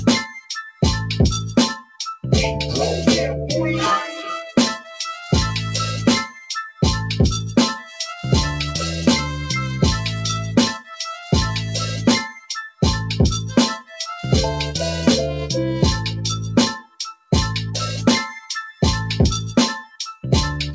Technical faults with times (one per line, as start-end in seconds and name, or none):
0.00-20.75 noise suppressor applied to music or sounds
0.35-2.23 sound cut by the noise suppressor
4.79-8.02 sound cut by the noise suppressor
10.79-14.03 sound cut by the noise suppressor
16.80-20.24 sound cut by the noise suppressor